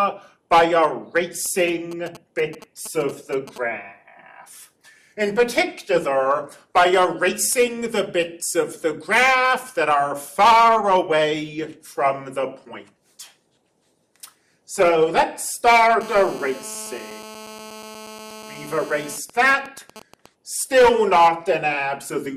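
From 1.46 to 3.58 s, GSM signalling bursts break in. A nearby 2G phone sends short radio bursts that the audio circuit rectifies. They gallop as ticks and brief 217 Hz buzzes, roughly 20 dB below the signal. From 16.01 to 19.16 s, a steady GSM phone buzz sits about 19 dB below the signal. The phone is in a call, pulsing 217 times a second. The result is a hard, raspy buzz full of harmonics. From 19.18 to 20.26 s, it turns to signalling bursts, even ticks with a longer buzz twice a second, as the phone's user goes silent.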